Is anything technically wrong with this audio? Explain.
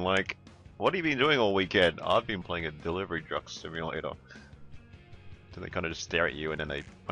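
No, nothing technically wrong stood out on listening to this audio.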